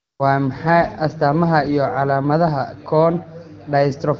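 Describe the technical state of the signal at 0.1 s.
At 0.1 s the signal is in an AMR comfort noise interval running from 0.00 to 0.19 s. The phone treated this stretch as silence and sent no speech frames, so the receiver synthesised a smooth, steady noise from a coarse level and spectrum description instead of the real background.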